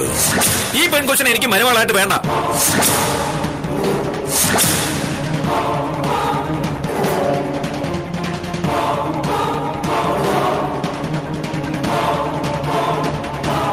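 Nothing in the clip stands out as a technical problem, so there's nothing here to flag.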